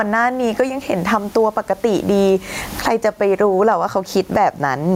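Gain pumping runs throughout this speech clip, with the level swinging by around 20 dB. This is likely a limiter or compressor reacting to input gain set far too high, clamping down on each loud syllable and releasing in the gaps. The room noise sits about 40 dB below the speech, and the speech itself sounds squashed, with loud and soft parts pushed close together.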